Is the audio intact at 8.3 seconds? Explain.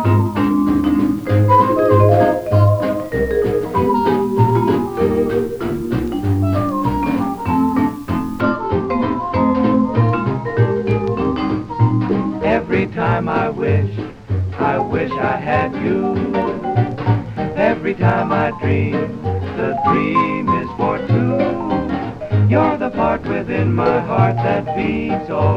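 No. At 8.3 seconds the sound is still under low bit depth with dither, which runs from 0.0 to 8.41 s. It is reduced to 8 bits, with dither added before rounding. The error becomes a steady, even hiss roughly 30 dB below the signal, without distortion.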